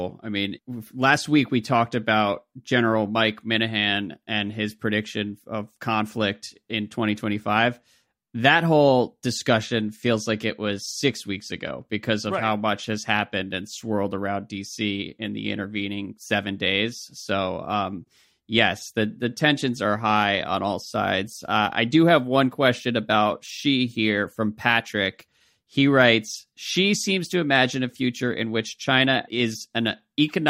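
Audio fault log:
No faults heard anywhere in this speech recording.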